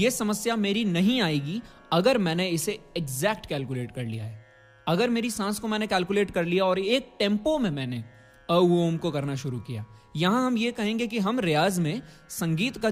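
No technical faults can be heard at any point in this clip, so there is nothing to set out in time order.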